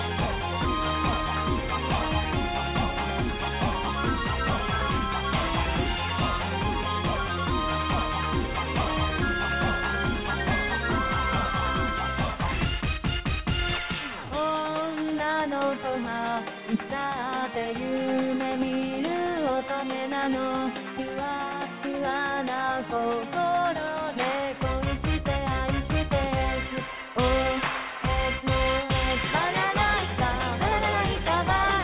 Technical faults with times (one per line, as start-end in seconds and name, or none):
none